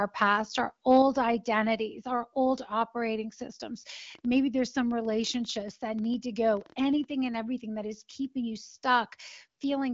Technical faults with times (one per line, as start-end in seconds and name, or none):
4.15-7.05 train of clicks